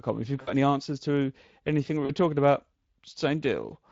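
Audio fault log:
Throughout: Speex codec. The CELP encoder had too few bits for the excitation signal, which fits a Speex mode of roughly 20 kbps. The audible result is a grainy, hoarse roughness and a noisy edge on the speech, and the damage is plainly audible in every part of the clip. The fine detail of each pitch pulse is replaced by a coarse approximation.
0.41–0.50 s and 2.05–2.13 s: VoIP packet loss concealed by the speech codec. About 60 ms of packets went missing just before "any answers to anything", and about 40 ms went missing between "answers to anything we" and "talking about". In each gap the decoder kept repeating its last pitch and filter at falling gain. This produces a brief smeared stretch that fades instead of a clean cut. The speech stays weak or distorted as packets resume, because each rebuilt frame leans on the previous one.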